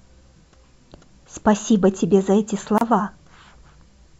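It's a speech clip with a gap at a join of encoded pieces: a 30 ms hole from 2.78 to 2.81 s, where separately encoded chunks were butted together with their padding silence left in.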